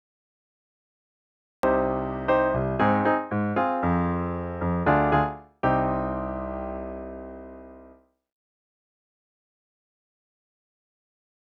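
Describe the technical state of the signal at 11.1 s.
At 11.1 s the signal is intact, with no dropout, distortion or other technical fault audible at that moment.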